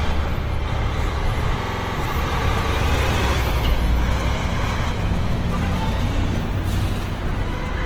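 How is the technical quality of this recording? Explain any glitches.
The technical quality is compromised by two faults: coding damage throughout and one stutter.

Throughout, a low-bitrate encoder, likely Opus compression in its music mode, fills starved bands with folded or noisy content, so everyday sounds turn grainy and rough despite full bandwidth.

From 1.63 to 1.95 s, a system hang loop occurs. The machine froze while the audio hardware kept replaying one 46 ms buffer, which fits 2048 samples. It repeats seven times, giving a machine-gun stutter at about 21.5 Hz, with essentially no audio lost.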